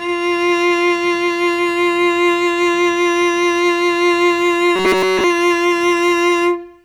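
Robotic sound from repeated short buffers appears from 4.76 to 5.24 s. The music collapses into a rigid, metallic buzz at 188 Hz. This likely comes from audio arriving too late and a buffer of about 5.3 ms being replayed over essentially the whole stretch.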